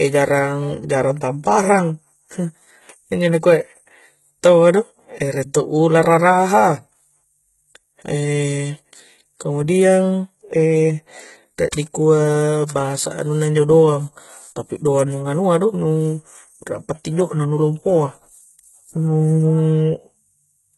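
Throughout the speech, the top end stops dead at about 11.8 kHz and the residue of a heavy earlier encoding stays audible. This is low-bitrate audio saved at a high bitrate, likely a very low-rate HE-AAC encode re-encoded as 320 kbit/s MP3.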